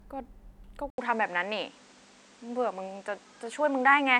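A speech clip in which the sound changes character at 0.90 s and stays that way to the end. A gap of about 80 ms of silence marks the change. After it, nothing above 9.8 kHz remains, so the speech turns duller. The level shifts by roughly 5 dB. A new background noise appears, about 30 dB below the speech. The cause is likely an input switched to a poorer device, with a narrower band and its own noise.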